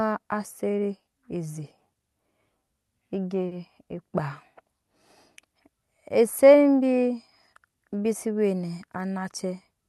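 At 3.47 s a short stall from a late packet interrupts the speech. It lasts until 3.54 s. A packet arrived late and the jitter buffer ran dry. The receiver held the last sound for 40 ms to bridge the gap, then resumed from the same point. No speech is lost. A sound is simply stretched. It comes across as a brief hang with a faint buzzy or dipped quality, and the delay grows by 40 ms.

From 9.05 s to 9.53 s there is a jitter buffer speed-up. The buffer had built up more audio than it wants, so the receiver trimmed it back. It cut many tiny slices, each a pitch period or a few long, in quick succession. Roughly 50 ms disappears in total. The speech plays at about 108% speed. Pitch stays the same, but the delivery sounds rushed. The call codec cuts off the audio above 12 kHz.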